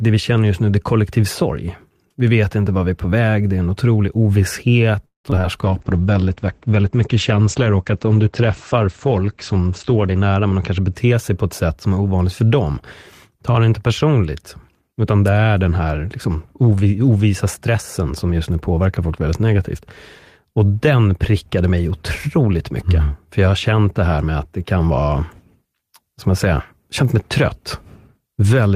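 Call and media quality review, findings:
Repeated packet loss (robotic sound), 5.05–5.46 s: choppy stretch. Four gaps, longest 188 ms, about 57% of span concealed; receiver extends last sound into each hole, 80 ms audio missing outright. Network transport.

Call bitrate drop, 5.61–11.0 s: rough, muffled speech. Bandwidth estimate fell, encoder pushed from 32 to 12 kbps for about 4.7 s; Opus codes coarsely and audio bandwidth narrows from 20 kHz to 8 kHz. Sender rate control.

Jitter buffer speed-up, 10.07–11.44 s: speech hurried at unchanged pitch, running at 113% speed. Receiver buffer over target, so pitch-period chunks removed repeatedly, roughly 200 ms in total, to cut delay. Receive-side playout.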